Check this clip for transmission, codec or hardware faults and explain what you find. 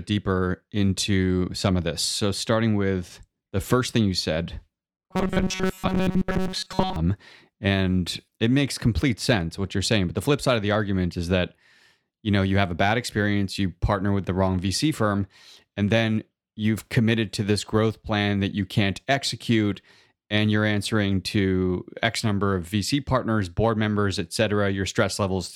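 One fault: robotic sound from repeated short buffers, from 5.11 to 6.96 s, just after "first thing you said". The speech becomes a stiff metallic buzz near 188 Hz that loosely tracks the words. The likely cause is audio arriving too slowly, so a roughly 5.3 ms snippet is looped for most of that stretch while the real audio is skipped.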